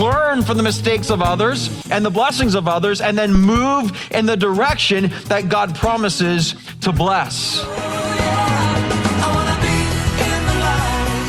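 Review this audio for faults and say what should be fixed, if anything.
A phantom power thump hits at 3.35 s and lasts until 3.43 s. It is a single deep low-frequency thump. It peaks at about -3 dBFS, close to clipping, and falls away within 17 ms. This comes from the supply switching while the input was live. The voltage step passed through the coupling capacitors as a pulse. To prevent it, mute the channel or lower the gain before switching phantom power on or off.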